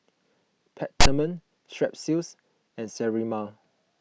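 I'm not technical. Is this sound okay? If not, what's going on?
No. At about 1.01 seconds the speech is interrupted by a short, harsh rasp, a burst of buzzy static with abrupt edges that stops at about 1.06 seconds. This is file tags played as audio. The file carries a block of text information, such as a title or other labels, and the player read those letters as if they were sound. Text turns into a lopsided, grating noise rather than anything resembling speech.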